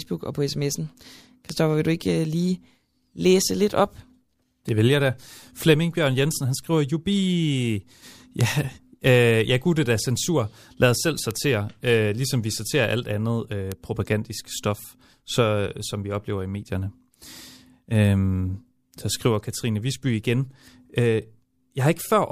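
Speech with bit error spikes, single sharp broadband ticks at 1.50, 4.69, 8.41, 11.31 and 13.72 s, peaking about -17 to -5 dBFS, from flipped bits in one to three samples.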